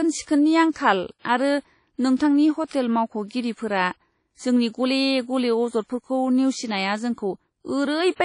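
Across the whole speech clip the sound is washy and ringing, with a hiss that swells and fades along with the voice, and nothing at all above 10.1 kHz. This is plainly audible WMA compression, likely from a lossy transform encode at a low bitrate, which fits roughly 32 kbps. Quantisation noise smears across long transform blocks, and weak high-frequency detail has been discarded.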